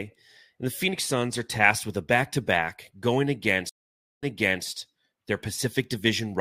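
At 3.69 s, just after "back to back going", there is a stream reconnect lasting until about 4.65 s. The connection dropped and the player went quiet for 0.53 s. It then reconnected and started a new decoder partway through the stream. The server resent a short burst, so the speech resumes 0.42 s earlier than where it broke off. The listener hears a gap, then a brief stretch of speech repeated.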